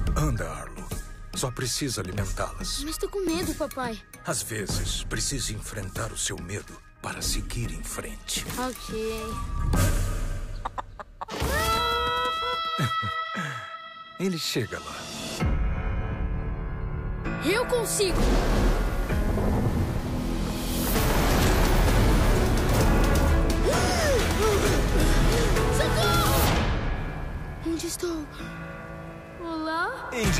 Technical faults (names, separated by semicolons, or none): dropped buffer (overrun)